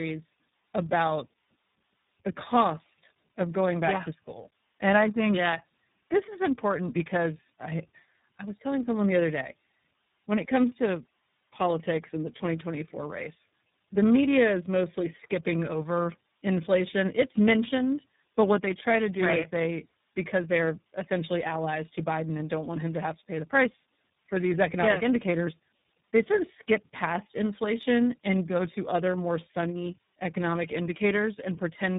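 Throughout, the speech sounds rough, muffled and warbly, with nothing above 3.8 kHz. This is tandem speech coding, pointing to three speech codecs in a row ending in iLBC.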